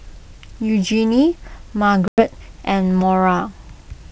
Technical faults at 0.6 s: none

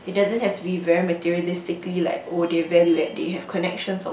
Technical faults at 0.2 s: none

